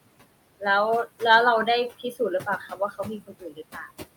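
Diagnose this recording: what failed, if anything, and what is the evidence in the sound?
The noise suppressor artifacts run through the whole clip, so the problem sits in call processing. The room noise, about 14 dB below the speech, gets pulled down by about 20 dB in the gaps and comes back up under the speech, so the floor pumps. The suppressor judges each frequency band frame by frame.

The same stage also causes speech cut by the noise suppressor, which you can hear twice. From 1.9 to 2.2 s, about a tenth of a second of speech dips by up to about 11 dB. From 2.41 to 3.89 s, around half a second in total drops by as much as about 20 dB. The suppressor took those soft, low-level parts for noise and turned them down with the background, so they sound swallowed and faint.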